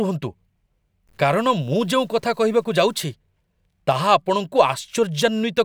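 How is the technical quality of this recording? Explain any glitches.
One glitch affects the recording, from 1.08 to 3.04 s. The likely cause is low bit depth without dither: the signal was truncated to what sounds like about 10 bits, leaving error that follows the speech. Quiet parts turn grainy and gritty, with distortion roughly 45 dB below the speech that shifts as the sound changes.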